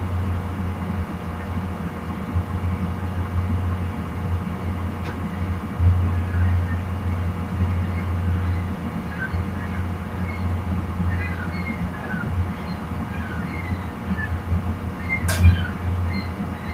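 No technical faults are audible.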